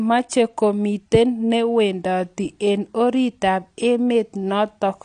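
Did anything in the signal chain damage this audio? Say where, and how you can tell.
Yes, the damage sits at the codec stage and runs through the whole speech clip: the sound is likely AAC compression, and its dullness and texture point to AAC-LC at a low rate, around 32 kbps. Nothing is present above 9.8 kHz, where the encoder has cut the spectrum off to save bits. The coarse quantisation of each frame's frequency lines against a hearing model leaves a plainly audible smeared, warbling quality on sustained sounds and a fizzy edge on sibilants.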